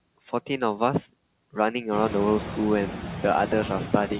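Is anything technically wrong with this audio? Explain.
Yes. Noise suppressor artifacts run through the whole clip. The suppressor treats steady background sound as noise and cuts it by about 20 dB, frame by frame, so the noise drops away in pauses and comes back up underneath the speech. This gets more noticeable after the room noise jumps by about 19 dB at around 2 s, leaving it only about 9 dB below the speech. The call path's 4 kHz ceiling, which fits narrowband G.711, sets the dull top end.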